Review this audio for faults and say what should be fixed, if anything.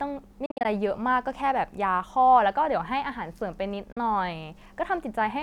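Bluetooth dropouts cut the speech at 0.46–0.65 s, with scattered gaps totalling 133 ms, and at 3.92–3.97 s, with a 40 ms gap. These are likely late wireless packets being discarded. To prevent them, keep the headphones close to the source and away from 2.4 GHz interference.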